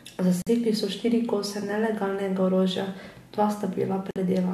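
At 0.42 s and again at 4.11 s the speech drops into brief silences of about 47 and 51 ms, with smeared edges, before resuming where it stopped. These are gaps at joins of encoded pieces: separately encoded segments joined with their encoder delay and end padding left in.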